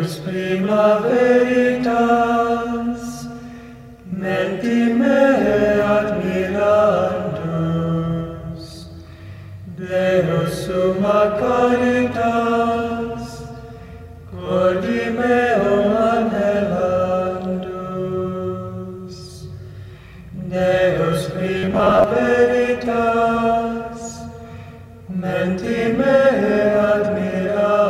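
Between 21.58 and 22.04 s, audio likely arrived too seldom, so about half was repeated short buffers, giving robotic sound: a rigid, metallic 93.8 Hz buzz.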